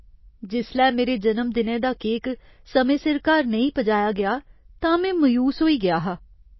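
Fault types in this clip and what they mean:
MP3 compression: The speech has nothing above 5.8 kHz, so it sounds dull and muffled. Coding damage is plainly audible throughout. The likely cause is an MP3 encoder starved of bits, which fits a bitrate around 24 kbps.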